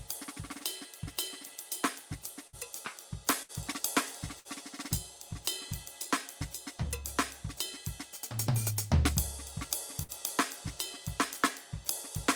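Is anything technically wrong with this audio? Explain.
Yes. Burst of packet loss at 2.47–2.56, 3.43–3.52, 4.39–4.48 and 10.03–10.11 s: lost packets left gaps the receiver filled by holding and fading the preceding music for about 60 ms, then skipped about 60 ms of audio.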